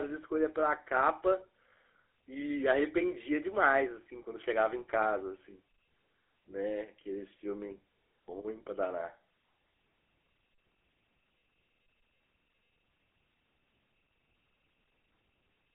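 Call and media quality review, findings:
GSM full-rate codec throughout. Buzzy, gravelly speech, band limited to 300 Hz–3.5 kHz. Coarse pulse-driven excitation, consistent with 13 kbps GSM full rate.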